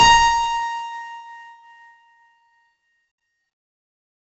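From start to finish the music passes through 4-bit ADPCM compression. Each sample is coded as a coarse four-bit step from a prediction, and the heavy quantising error, which fits a 64 kbps stream, rides on the signal as a gritty hiss that swells with every loud passage and roughens sharp attacks where the step size lags. Nothing is present above 7.8 kHz, pointing to a low sample rate that leaves the whole clip dull.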